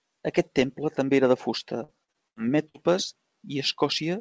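From 1.84 to 2.76 s, packets were repeatedly lost or arrived late. Six gaps, the longest 76 ms and together about a quarter of that stretch, were filled by stretching the preceding sound. This repeated packet loss leaves the speech choppy and robotic, with fragments missing.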